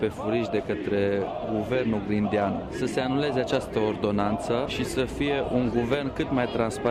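No technical faults can be heard anywhere in the audio.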